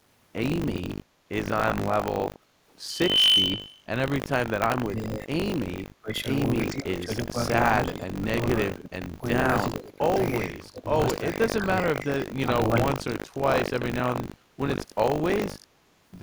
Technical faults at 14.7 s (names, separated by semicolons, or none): buffer tearing